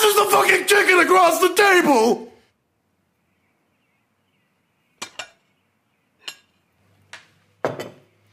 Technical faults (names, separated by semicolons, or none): none